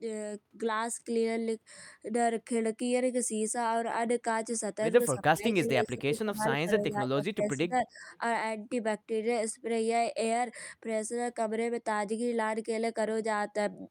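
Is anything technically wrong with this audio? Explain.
Yes, there are two problems in this speech clip.

From 5.14 to 8.1 s the speech dips hard, by about 20 dB at its deepest, and thins out or drops in pieces. It sounds like speech suppressed in double talk, likely an echo canceller ducking everything when both sides talked at once.

Right after, from 8.14 to 8.18 s, there's a brief echo leak: a very faint copy of the voice, about 35 dB down, arriving 282 ms late. It's a short scrap the far end's canceller likely let slip back through its loudspeaker-to-mic path.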